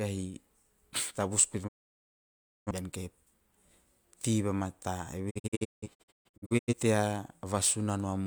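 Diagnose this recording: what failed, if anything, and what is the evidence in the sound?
Speech fades out within 20 ms at 1.67 s and stays silent until 2.71 s, then from 5.29 to 6.74 s breaks into short holes, the longest 0.17 s. This is a digital broadcast dropout at reception: failed frames made the receiver mute, discarding that audio.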